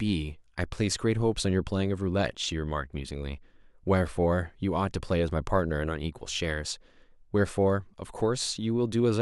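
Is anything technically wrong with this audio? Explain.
Yes. From 0.16 s to 9.22 s the speech carries clock slip clicks: faint, evenly spaced ticks roughly every tenth of a second, about a hundred in all, most audible on louder passages and gone in pauses. The likely cause is two devices running on unsynchronised clocks that differ by around 200 ppm. Whenever that drift accumulates to a full sample, a single sample is dropped or repeated, leaving a small discontinuity in the waveform.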